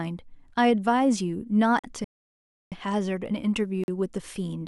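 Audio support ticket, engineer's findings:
Gap between chunks at 1.79 s and 3.84 s: 44 ms holes in the speech, repeating every 2 s. Probably the chunk handling in the player or packager, padding or a late start at each join. Nothing lost, just interrupted.

Rebuffering stall from 2.04 s to 2.72 s: speech drops to silence, then picks up exactly where it stopped. Player starved of downloaded audio and waited for more. Adds about 0.67 s, no content missing.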